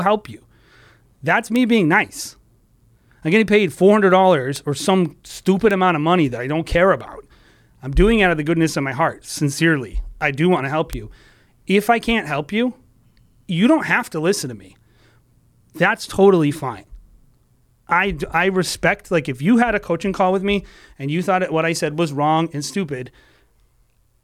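A flipped bit in the digital path throws a sample or two out by a power of two, producing a bit error spike at 1.56 s before "being nice", 4.56 s before "or some stupid amount", 5.71 s, and 10.93 s after "do want to help": each a sharp, broadband tick peaking near about -8 dBFS.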